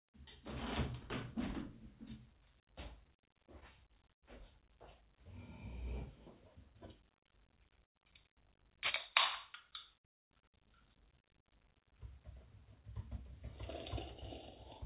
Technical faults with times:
3.87-4.24 short stall from a late packet
7.85-7.97 call audio freeze
12.28-13.39 jitter buffer speed-up

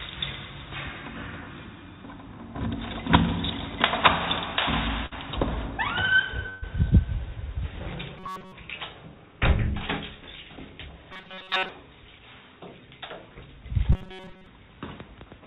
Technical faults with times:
5.06-5.13 burst of packet loss
6.49-6.64 burst of packet loss
8.18-8.52 robotic sound from repeated short buffers
11.13-11.69 robotic sound from repeated short buffers
13.92-14.46 robotic sound from repeated short buffers

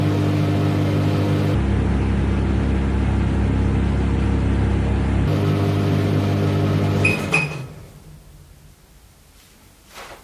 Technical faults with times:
1.54-5.27 wrong sample rate

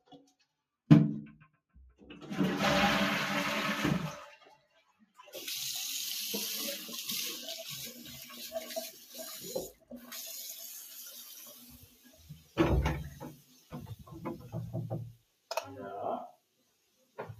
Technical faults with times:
0.00-17.40 noise suppressor applied to music or sounds
4.55-5.23 sound cut by the noise suppressor
7.92-8.47 sound cut by the noise suppressor
8.90-10.14 sound cut by the noise suppressor
10.50-12.57 sound cut by the noise suppressor
13.34-13.72 sound cut by the noise suppressor
15.16-15.50 sound cut by the noise suppressor
16.33-17.18 sound cut by the noise suppressor

